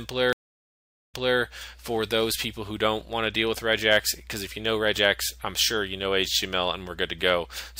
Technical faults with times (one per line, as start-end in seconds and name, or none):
0.33-1.39 stream reconnect